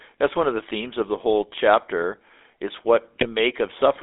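From the start, the speech carries the sound of the GSM full-rate codec. The band is narrow, running from about 300 Hz to 3.6 kHz. Everything above is gone. The codec rebuilds the voice from a vocal tract model driven by spaced pulses, and that coarse excitation is plainly audible. The voice turns buzzy and gravelly. The thin, grainy texture points to the old 13 kbps GSM coder.

From 3.20 to 3.26 s, a short burst of GSM bit errors cuts in. Flipped bits reached the decoder and corrupted its filter, pitch or gain values. For that instant the spectrum bends out of shape or the level jumps. The sound breaks into a brief squawk with a gargling edge. Its length, about 64 ms, fits a single damaged frame rather than a long dropout.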